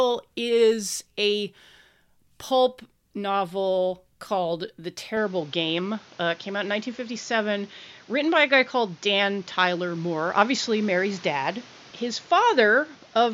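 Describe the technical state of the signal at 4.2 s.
The signal is intact at 4.2 s, with no audible fault at that point in the speech.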